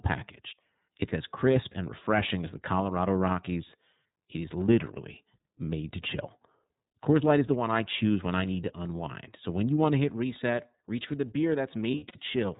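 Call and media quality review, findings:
iLBC codec, whole call: band-limited, nothing above 4 kHz, speech clear but a bit rough and synthetic, plainly audible. Fits iLBC's 30 ms frame mode at 13.33 kbps, each frame's excitation coded on its own.

Lost iLBC frames, 11.91–12.18 s, right after "reach for the beer": short buzzy, held-vowel smears. About 150 ms missing, scattered over 240 ms (consistent with five lost frames), longest gap around 70 ms. Decoder repeats the last pitch cycle plus noise, then recovers immediately.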